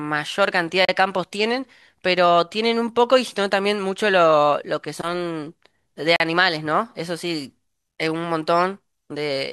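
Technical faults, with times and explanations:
0.85–0.89 s and 6.16–6.20 s, Bluetooth stall: The speech drops to silence twice, for about 36 ms and then 40 ms, and resumes abruptly each time. The cut is clean, with no fade or smear. The likely cause is radio interference on the wireless link. Packets were held up, the headphones' small buffer emptied, and playback stopped until the resent data arrived. The gap's length matches the time spent waiting for it.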